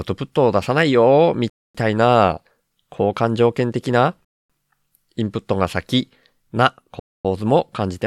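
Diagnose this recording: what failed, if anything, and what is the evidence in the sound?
Gap between chunks at 1.50, 4.25 and 7.00 s: hard-edged 250 ms silences as each 2.5 s chunk of speech starts late in chunked storage or playback.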